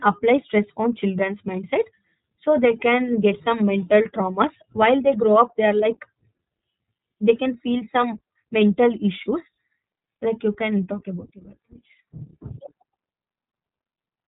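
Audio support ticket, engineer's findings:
iLBC codec, whole clip. Speech band-limited, nothing above 3.8 kHz. Narrowband VoIP path. Coding damage plainly audible. Voice slightly rough, synthetic edge. Cause: each short frame's excitation coded on its own, no carry-over from the previous frame. Roughness fits 20 ms frames at about 15.2 kbps. Missing sibilance and air from the narrowband limit.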